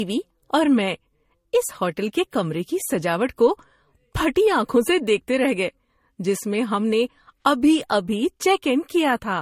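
From start to finish the speech carries a layered coding texture, with nothing above 16.5 kHz, and that combination points to transcoding between lossy codecs. The likely story is a Vorbis encode later re-encoded as MP3, both at low rates, something in the region of 48 kbit/s. The MP3 stage wastes bits re-coding the Vorbis artefacts and stacks its own artefacts on top, so you hear two flavours of damage at once.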